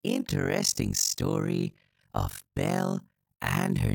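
Overlap-add ripple runs through the whole clip: the speech was split into windowed frames and rejoined with overlaps that fail to sum to constant gain, so level dips by about 60 dB once per frame, around 50 times a second, giving a harsh, robotic flutter.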